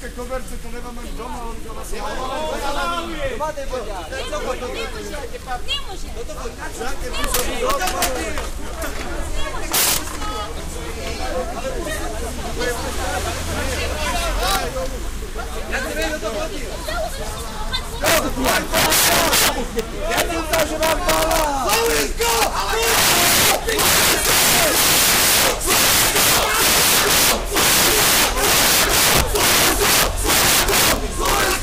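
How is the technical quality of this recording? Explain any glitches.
The recording is marred by repeated integer overflow. It cracks across 7.24 to 8.05 s, 9.74 to 9.97 s, 14.43 to 14.56 s, once at 16.02 s, and throughout 18.05 to 31.54 s. Peaks driven past the integer ceiling, by about 15, 15, 3, 0 and 14 dB, wrap to the opposite extreme instead of limiting. The result is violent cracks far harsher than clipping. On a waveform they appear as sudden jumps from one extreme to the other. A spectrogram shows them as broadband vertical streaks.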